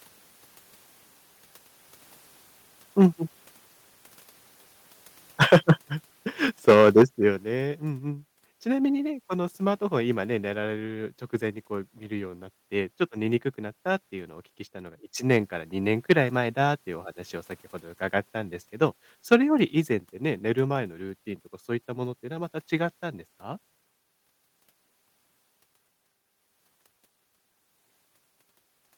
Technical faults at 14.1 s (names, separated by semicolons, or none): none